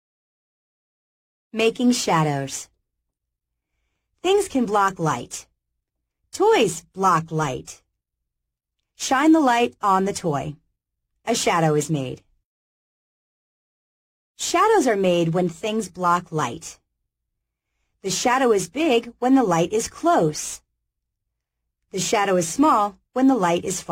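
Nothing in the recording stood out as a technical fault on listening.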